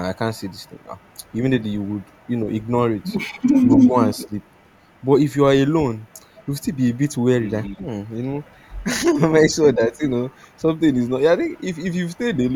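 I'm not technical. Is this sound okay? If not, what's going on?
No, not quite. There are three things going on.

The first is echo leak. From 0.35 to 5.04 s you'll hear a faint second copy of the speech trailing about 0.22 s behind. It comes back from 5.97 to 8.83 s and from 9.89 to 12.18 s, getting quieter each time until it's barely there. The likely cause is that the other end had the call on a loudspeaker and their echo canceller didn't fully scrub it out.

The second is speech suppressed in double talk. Between 3.65 and 4.31 s the speech briefly dips in places, adding up to about a tenth of a second, and the deepest dip is a clear but not total drop. That's likely the echo canceller getting confused while both sides were talking at once and turning everything down to be safe.

The third is DC offset, and it runs through the whole clip. The recording sits off-centre, as if the whole thing were nudged away from its resting point. 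You can't actually hear it, but it wastes some of the loudness range and can cause a small click when the audio is cut or edited.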